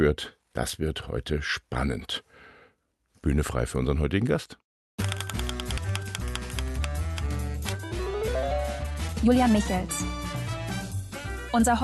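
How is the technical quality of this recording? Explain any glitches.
The recording has two glitches from a call's transmission and jitter buffer, heard through a call codec that caps the highs near 12 kHz.

Skip ahead at 5.77 s: about a second of audio was dropped while later audio waited, so playback jumps forward, joining both sides almost directly.

Jitter buffer speed-up from 7.72 to 9.59 s: the overfull buffer cut short pitch-period pieces repeatedly, a few tenths of a second in total, so the sound runs at 122% speed, hurried, pitch unchanged.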